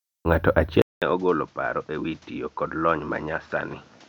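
At 0.82 s this speech recording cuts out for about 200 ms, and when the sound returns it is duller and more boxed-in, with nothing above 7.6 kHz, a level around 10 dB lower and a new background noise floor sitting roughly 35 dB under the signal. It stays that way to the end. This is likely an input switched to a poorer device partway through, with the system handing capture over to a narrower-band microphone that has its own tone, gain and noise.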